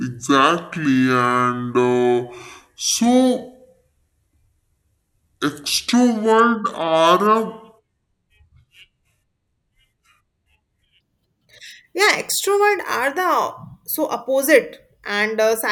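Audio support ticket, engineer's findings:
Section at the wrong speed, 0.00–11.00 s: speech slowed to 0.612x, pitch down about ten semitones. Likely a sample-rate or clock mismatch in playback or editing.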